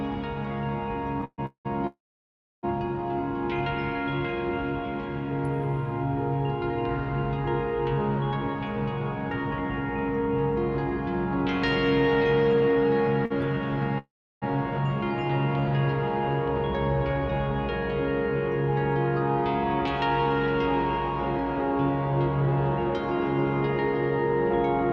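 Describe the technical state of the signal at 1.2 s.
At 1.2 s the signal enters a run of repeated stalls (stutter), lasting from 1.21 to 1.67 s. Packets arrived late, so the jitter buffer ran dry three times. Each time the receiver stretched the last sound to cover the wait. About 333 ms is filled this way, most of the span. The longest gap is 188 ms. Nothing is lost. The audio drags and stutters.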